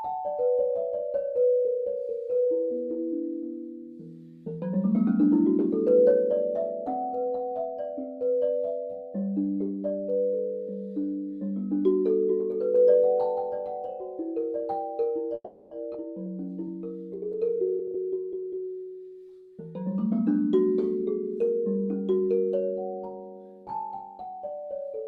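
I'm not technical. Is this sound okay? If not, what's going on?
No. At 15.34 to 15.72 seconds there is a call audio freeze. The last sound is stretched into a fading buzz or hiss and briefly drops to silence, then carries on. Nothing is lost. The likely cause is delayed network data.

At 15.93 to 15.95 seconds there is a skip ahead. About a sixth of a second of audio is cut out, and playback jumps forward.

From 17.50 to 18.85 seconds there is a jitter buffer speed-up. The audio plays at about 118% speed and sounds hurried, but the pitch stays the same. About a third of a second is squeezed out.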